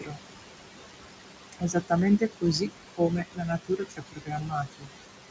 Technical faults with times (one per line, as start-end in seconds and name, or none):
0.00-5.30 noise suppressor artifacts
0.01-0.21 speech cut by the noise suppressor
1.52-1.92 speech cut by the noise suppressor
2.19-4.92 speech cut by the noise suppressor